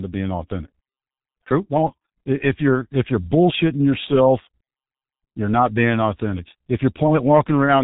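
From start to finish the speech sounds muffled and hoarse, with consonants smeared together and no brightness at all, since nothing above 3.8 kHz survives. The damage is heavy, and it is the mark of the G.723.1 codec, an early internet-telephony coder. Working in 30 ms frames at a very low rate, which here sounds like about 6.3 kbit/s, it refreshes its model of the voice too slowly to follow quick sounds, so fast detail blurs.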